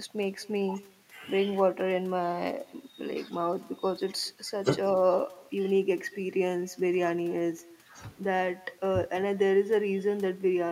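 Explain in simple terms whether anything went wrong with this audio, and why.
Something did go wrong: there's echo with no canceller running through the whole clip. The far end is playing the call out loud, their mic catches it, and nothing strips it out, so every bit of speech comes back about a fifth of a second later as a faint, thin copy.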